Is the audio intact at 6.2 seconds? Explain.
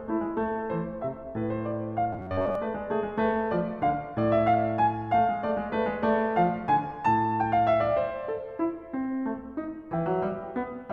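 Yes, the music plays through 6.2 seconds without any dropout, click, glitch or other fault.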